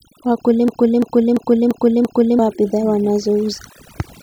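Overdone noise removal runs through the whole speech clip. The noise reduction was set too strong. Frequency bands close to its noise estimate are pushed down or removed, taking quiet parts of the voice with them. The background drops and breaks up into twinkling specks.

From 0.68 s to 2.39 s there is a system hang loop. The computer or driver froze while the sound hardware kept replaying one ring buffer. A 341 ms piece repeats exactly five times, at about 2.9 per second, which fits a 16384-sample buffer. Roughly one and a half seconds of audio is lost.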